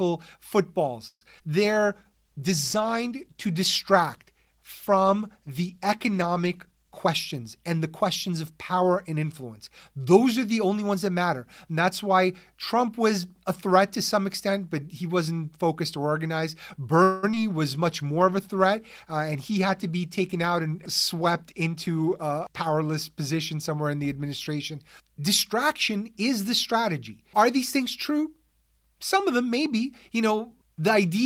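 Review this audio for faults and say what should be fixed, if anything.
Call audio freeze at 1.07 to 1.23 s: the sound stalls for about 138 ms, the last fragment is stretched into a fading buzz that drops to silence for about 50 ms, and then the audio resumes where it stopped with nothing lost. The likely cause is packets held up in transit while the jitter buffer ran dry, so playback had to invent audio until they arrived. Prevention: give the jitter buffer enough headroom to ride out brief network stalls.

Skip ahead at 1.39 to 1.42 s: playback jumps forward, dropping around 70 ms of audio, and the two sides are spliced almost directly with only a few milliseconds of filler. A stretch of audio was discarded while later material was already queued, either lost in transit or thrown out by an overfull jitter buffer, so the delay shrank at once. Prevention: avoid overflow discards by adapting buffer depth smoothly rather than flushing.

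Call bitrate drop from 1.63 to 7.05 s, and again from 17.74 to 22.85 s ending just before "position somewhere in the": the sound turns coarse and muffled for over five seconds each time, with the top end dulled. This fits the encoder being pushed from about 32 kbps down to 15 kbps, then 18 kbps, after the bandwidth estimate fell, so Opus quantised more heavily and trimmed high frequencies. Prevention: tune congestion control so the bandwidth estimate does not collapse on brief dips.

Jitter buffer slow-down at 1.74 to 2.42 s: the audio runs at about 90% speed with pitch unchanged, and sounds are drawn out, adding 72 ms in total. The receiver was building up its reserve by repeating single pitch periods and pause fragments many times in a row, stretching the timeline without shifting pitch. Prevention: keep the target delay stable so the buffer is not forced into sustained stretching.

Jitter buffer speed-up at 7.05 to 9.24 s (about 107%) and 19.35 to 21.89 s (about 106%): the audio sounds hurried at the same pitch, with roughly 150 ms removed in each stretch. 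Excess buffered audio, typical after a burst of late packets arrives together, was trimmed by cutting one or a few pitch periods at a time to pull latency back down. Prevention: smooth packet delivery and drain surplus buffer more gradually.

Repeated packet loss (robotic sound) at 17.03 to 17.38 s, right after "wasn't focused or organized": the sound turns choppy across three gaps, the longest about 196 ms, with about two thirds of that span synthesised and about 40 ms missing outright. Each lost or late packet was patched by extending the previous sound, and the next hole followed before clean audio returned. Prevention: enable forward error correction and check the path for bursty loss.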